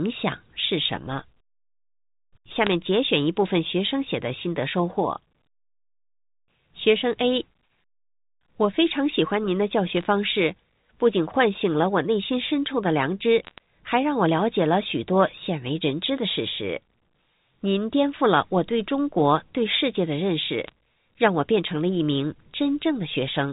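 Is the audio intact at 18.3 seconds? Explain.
Yes, the audio is intact at 18.3 seconds, with the speech carried cleanly through its G.711 telephone coding.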